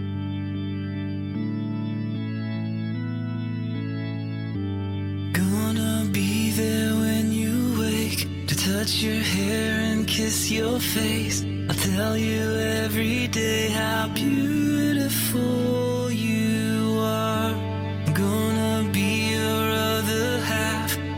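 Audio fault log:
9.68–15.68 s, adaptive stream at a lower bitrate: the connection slowed and the player switched to a leaner encoding, which fits a drop from 64 to 24 kbit/s Opus. Codec artefacts rise, and quality changes abruptly at both edges without any gap.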